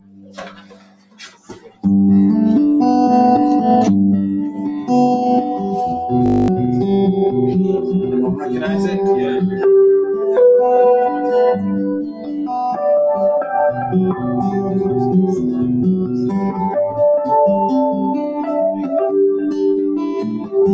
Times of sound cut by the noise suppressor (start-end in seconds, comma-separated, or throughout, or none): 0.00-1.85, 12.01-12.45, 20.23-20.54